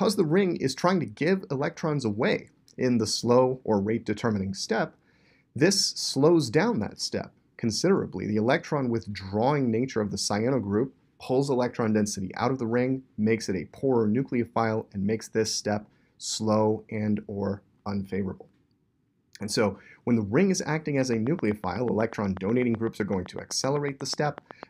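The last few seconds carry a train of clicks. From 21.02 s to 24.64 s there's a steady ticking at about 8 clicks per second, evenly spaced, around thirty in all, each one much the same shape and poking out about 5 dB above the sound underneath. The regular pace points to a periodic disturbance, likely interference from nearby equipment or a faulty connection or power supply.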